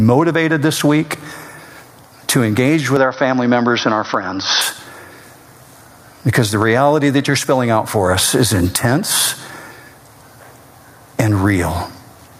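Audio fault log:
throughout: gain pumping. The level is pulled down on every loud sound, with the level swinging by around 20 dB, so loud and soft parts end up closer in level and the speech sounds squashed. The likely cause is input gain set far too high, with a fast limiter or compressor clamping down on each peak.
2.96–4.61 s: input switched to a poorer device. Right after "to engage", the speech turns dull and boxy, with nothing above 6.1 kHz, then opens back up at 4.61 s. There is no gap at either switch and little or no change in loudness, with only a faint new noise floor well beneath the speech. This likely comes from the input moving to another microphone or a headset call profile. A low-pass filter would not bring that change of tone and noise, nor would it start and stop so abruptly.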